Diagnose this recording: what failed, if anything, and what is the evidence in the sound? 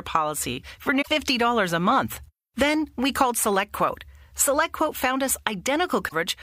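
Damaged data in a compressed stream at 0.98 to 1.08 s, just after "policy for", and at 6.05 to 6.13 s: corrupted codec frames, misread until the decoder resynchronised.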